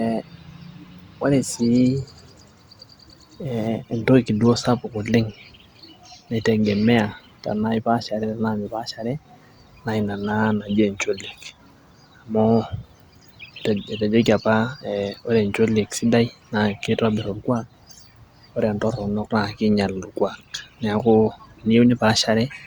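No technical faults are audible.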